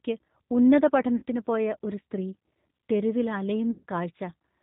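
Throughout, the speech carries plainly audible G.729 coding at 8 kbit/s. Each 10 ms frame is rebuilt from a vocal tract filter, a pitch predictor and a handful of pulses, which leaves a rough, faintly synthetic timbre. A spectrogram shows an empty band above 4 kHz.

At 1.16 to 1.23 s, just before "പോയ ഒരു സ്ത്രീ", and again at 3.71 to 3.84 s, VoIP packet loss concealed by the speech codec fills about 60 ms and then 120 ms of missing audio. These gaps fit two and four lost 30 ms packets. The decoder extends its last pitch and filter at falling gain, so each gap becomes a stretched, fading sound. The waveform shows a shrinking stretch.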